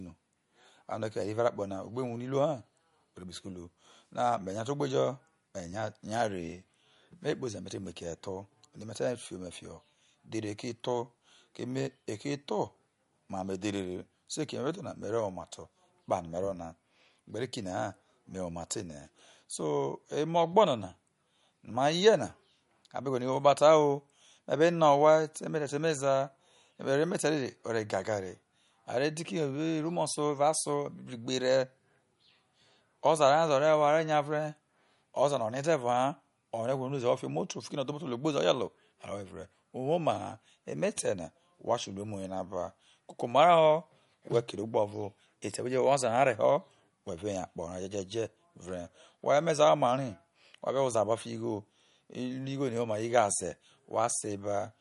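Throughout, the speech carries MP3 compression damage. Nothing sounds above 11.2 kHz, and sibilants turn watery. This likely comes from MP3 encoding at a low bitrate, around 47 kbps.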